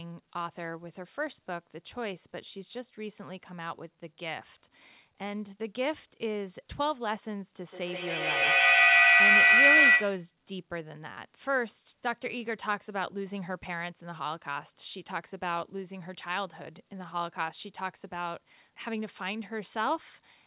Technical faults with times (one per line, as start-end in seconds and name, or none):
7.62-10.34 feedback howl